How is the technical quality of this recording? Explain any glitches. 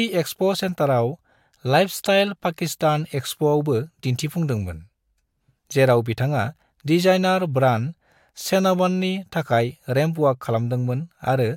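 No glitches or technical faults can be heard here.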